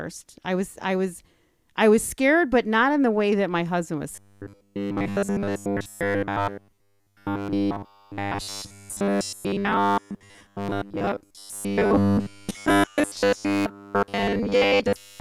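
From 4.12 s, right after "that my husband was", to the end, the speech becomes a rigid, metallic 100 Hz buzz loosely tracking the words. This is robotic sound from repeated short buffers, likely from late audio being patched by looping 10 ms chunks, covering most of the stretch.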